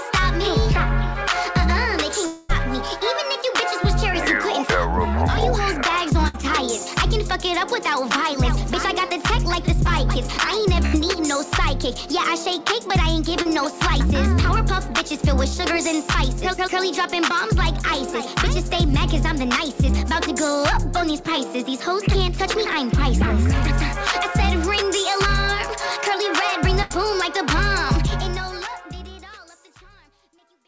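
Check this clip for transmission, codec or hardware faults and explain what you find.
Five network faults occur, all heard through a call path that carries nothing above 8 kHz.

From 2.26 to 2.64 s there is a long network dropout. Audio likely stopped arriving for about 240 ms, and the receiver stretched the last sound into a fading buzz or hiss before resuming further on.

At 6.28–6.36 s, 10.86–10.96 s and 26.82–26.92 s there are bursts of packet loss. Runs of 60 to 80 ms never arrived in time, so the receiver held and faded the preceding sound, leaving a brief buzz or hiss and a skipped stretch.

At 13.42–13.47 s there is a short concealed packet loss. About 40 ms missed the decoder, and the continued waveform, blended back in, leaves a quick smear or wobble.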